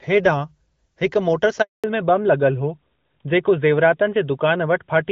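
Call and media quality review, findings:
Handover gap, 1.62–1.84 s: speech fades within tens of milliseconds into 220 ms of flat silence, content lost. Network handover, no frames delivered during the switch. Unlike packet-loss concealment, there is no smeared or repeated sound, only a clean dropout.

Fallback to narrowband, 1.84 s to end: nothing above 4 kHz, duller and rougher speech. The codec dropped from a wideband HD Voice link, which sounds consistent with AMR-WB near 12.65 kbit/s, to what fits AMR-NB at 12.2 kbit/s. Unlike an EQ roll-off, the band cut is abrupt and starts exactly at the gap.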